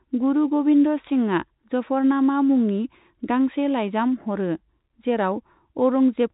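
Nothing stood out on listening to this telephone-band speech, which carries nothing above about 3.8 kHz, as expected for G.711 telephone coding.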